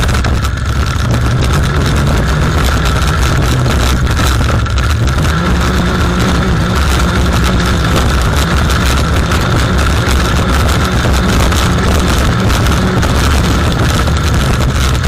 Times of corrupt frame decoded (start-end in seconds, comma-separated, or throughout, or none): 1.42, 6.59-6.62, 7.58-7.62, 9.34-9.40, 11.82-11.86